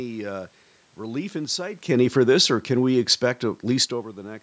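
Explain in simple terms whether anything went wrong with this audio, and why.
One thing went wrong: automatic gain falling. Just after "uh relief in sight", from about 1.9 to 3.99 seconds, the call's automatic level control decided the input was too loud or too noisy and turned it down gradually. The speech and the room noise behind it sink together, which is how you can tell the system did it. The shifts near 1.5 and 4.0 seconds are different: they sound like the talker moving relative to the microphone.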